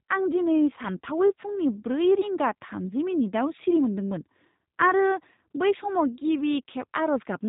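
The whole way through, the speech has that G.729 codec character, and the damage is easy to hear. The top end stops dead at about 3.8 kHz, so it sounds boxed-in and phone-like. The roughness and slightly synthetic edge come from the codec rebuilding each stretch from a vocal tract filter, a pitch guess and a handful of pulses rather than the real waveform, which fits a low-rate 8 kbit/s setting.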